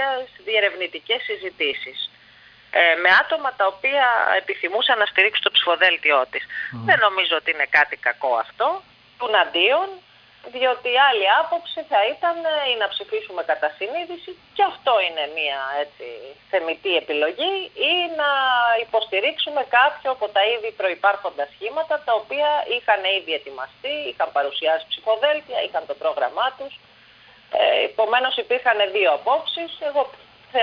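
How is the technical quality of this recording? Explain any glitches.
No technical glitches can be heard anywhere in the recording, and the signal holds steady throughout.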